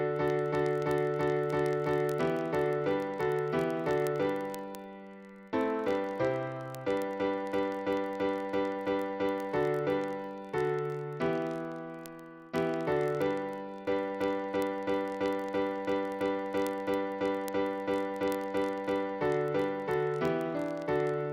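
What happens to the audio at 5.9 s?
At 5.9 s the audio carries word clock ticks, which run from 0.12 s to 21.32 s. The receiver's clock is not locked to the sender's and differs by roughly 0.1 percent. Each slip, about every 20 ms, fits one sample being dropped or repeated. It sounds like a steady rattle or buzz.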